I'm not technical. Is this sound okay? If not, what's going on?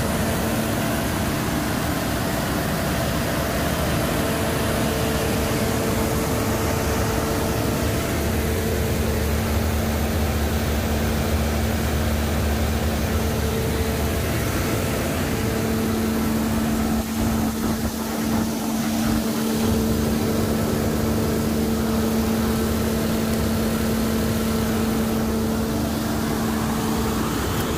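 No. Word clock ticks run from 0.15 s to 27.69 s: a steady stream of sharp clicks about five times a second, around 150 in all, some louder than others. The audio passed between two digital devices whose internal clocks weren't locked together and ran at very slightly different speeds. Each time they drifted a step apart, the receiving device misread the signal and lost or doubled a single tiny slice of sound, producing a tick.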